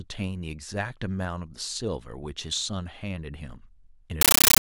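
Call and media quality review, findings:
Compressed stream played as audio, 4.21 s to clip end. Sink takes the Dolby Digital bitstream as PCM without decoding. Each frame becomes a 13.3 ms noise burst plus zero padding, 31.25 per second: loud chattering static replacing the speech.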